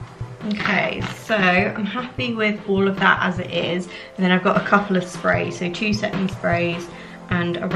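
No technical faults can be heard anywhere in this recording.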